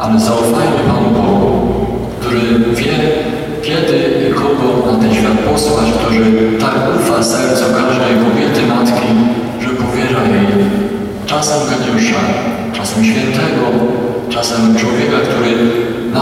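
Nothing stood out as a technical fault on listening to the recording.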